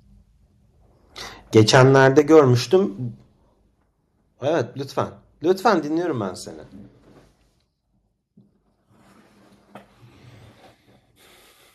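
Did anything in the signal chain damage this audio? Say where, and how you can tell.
Yes. From 1.55 to 2.4 s the speech shows microphone overload at the converter, most likely because the input volume was set too high, driving peaks about 7 dB past full scale. The loudest syllables take on a harsh, crackling edge as their tops are sheared off. On the waveform, around 2% of samples show flattened, cut-off tops. A spectrogram shows broadband vertical smearing of distortion energy above the harmonics at those peaks.

The microphone volume is stepped down twice, at 2.19 s by about 6 dB and at 3.21 s by about 5 dB. This is likely the call processing reacting to the clipping and cutting the device's input volume in one move. Both voice and background fall abruptly in level, the first drop landing inside the distorted stretch. The waveform envelope shows two clean stair-steps downward, and the spectrogram dims uniformly across all frequencies at each point, with no change in spectral shape.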